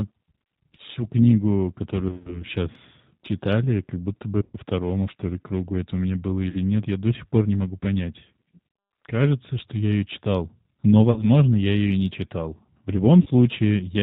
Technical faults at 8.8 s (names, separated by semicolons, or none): G.729 codec; VoIP packet loss concealed by the speech codec